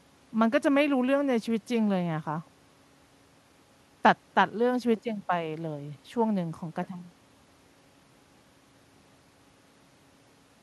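Listening through the speech recording, nothing stood out as a technical fault at any point.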